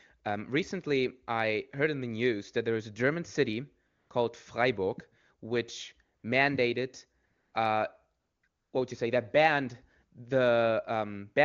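AMR comfort noise kicks in five times, at 3.87–4.09, 6.19–6.23, 7.25–7.53, 8.19–8.43 and 8.47–8.73 s. Each time the phone decided nobody was talking, stopped sending speech frames, and the far end filled the gap with smooth synthetic hiss, swapping out the real background and possibly clipping soft word endings.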